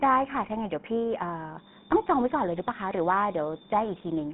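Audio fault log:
Throughout, GSM full-rate codec: the speech has a buzzy, gravelly roughness and sounds plainly damaged. It is confined to a narrow telephone band, with nothing below about 150 Hz or above 3.4 kHz. The grit comes from the codec modelling the vocal tract and driving it with a coarse pulse train that keeps only every third excitation sample. That crude excitation gives the rasp, and the character fits the 13 kbps full-rate coder.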